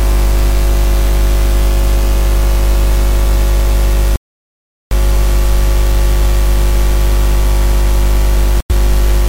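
Likely a Bluetooth stall: the headphone buffer ran dry, cutting the audio to silence from 4.16 to 4.92 s, then briefly from 8.60 to 8.71 s.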